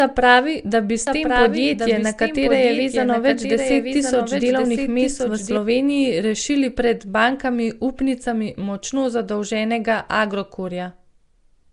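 A speech recording. Throughout, the sound has a rough, hissy halo and a smeared, underwater quality, with nothing above 10.6 kHz. This is likely Nellymoser compression, a block codec that starves weak bands of bits and fills them with noise, fitting a stream near 44 kbps. From 1.07 s to 5.57 s, a second full-band copy of the speech runs about a second behind, about 5 dB quieter. It has no decay or room colour, and it starts and stops abruptly. This is likely a doubled audio track, with the same signal captured again through a slower path.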